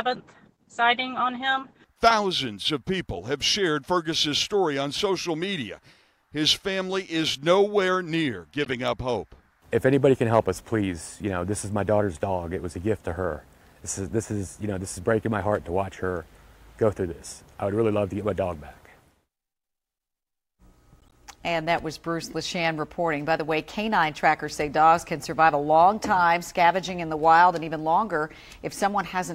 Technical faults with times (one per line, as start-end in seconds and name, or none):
8.63-8.68 corrupt frame decoded
21.01-21.14 corrupt frame decoded